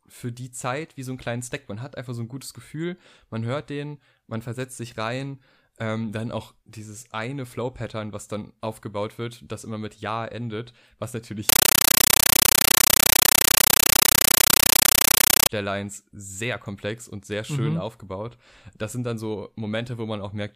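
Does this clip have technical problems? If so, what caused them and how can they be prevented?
Yes. Compressed stream played as audio, from 11.49 to 15.49 s, just after "endet was": the speech gives way to very loud, chattering static. The receiving end took an undecoded Dolby Digital bitstream for ordinary samples, so each data frame comes out as a 9.33 ms burst of noise followed by silent padding, repeating 31.25 times a second, which fits a 448 kbps AC-3 stream. To prevent it, make sure the device either decodes the bitstream or is set to send plain PCM over the digital link.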